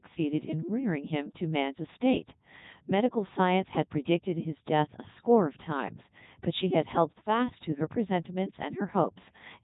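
Codec 2 vocoder damage throughout: speech is resynthesised from sine waves rather than its waveform, sounding heavily robotic and buzzy, with nothing above 3.8 kHz, which fits 3.2 kbit/s.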